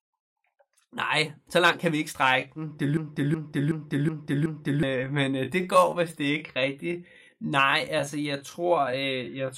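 Right after "langt kan vi ikke", at 2.12 s, the pace suddenly drops to about 0.71 times normal speed while the pitch holds, and it stays that way to the end. That's a time-stretched section, likely from software padding the audio to fit a length, and it drags.

Then from 2.97 s to 4.83 s you get a system hang loop. The same 0.37 s chunk repeats exactly five times at about 2.7 Hz, which fits a 16384-sample buffer cycling while the system froze. It comes across like a skipping record, and around two seconds of audio are simply gone.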